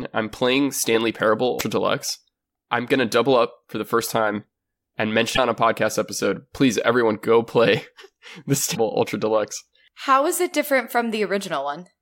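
Damaged data in the compressed stream makes the decoder misread frames and lose sync until it finds the next frame header. This produces brief blips in the speech from 1.56 to 1.61 s and again from 8.71 to 8.77 s.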